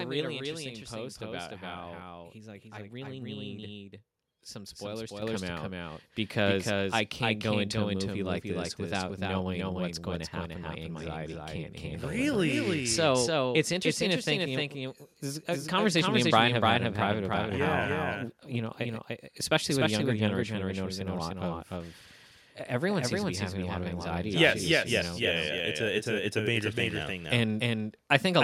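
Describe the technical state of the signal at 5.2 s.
At 5.22 s the microphone volume steps up. Speech and background jump together by about 8 dB in a single step. This is the call software raising the device's input gain after judging the microphone too quiet.

A doubled audio track also runs through this moment. A second full-band copy trails about 300 ms behind, roughly 5 dB quieter, with no decay or room colour. It is likely caused by a slower second capture path or misaligned copies in an edit.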